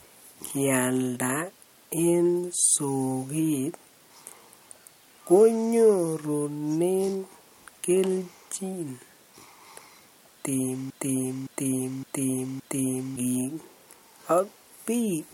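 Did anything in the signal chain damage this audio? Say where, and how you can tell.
Yes: from 10.90 to 13.16 s the speech falls into a broken-record loop. A 0.57 s fragment repeats four times, likely a stalled player or stream, and the real audio is lost.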